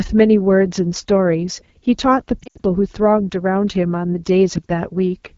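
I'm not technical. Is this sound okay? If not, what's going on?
No. The whole recording passes through the AMR wideband (HD Voice) codec, the phone-network compression, run at one of its lowest quality settings. It rebuilds speech from a simplified model of the voice, so everything sounds rough and raspy, plainly so throughout.

From 2.40 to 2.62 s there are lost AMR speech frames: radio errors corrupted short chunks of data. The decoder briefly repeated the last good sound at fading volume, so speech there warbles, dips and drops out for moments, after which it returns weak and rough.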